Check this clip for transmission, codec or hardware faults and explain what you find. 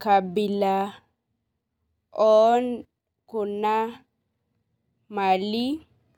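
Nothing in the speech points to a transmission, codec or hardware fault, and the signal holds steady throughout.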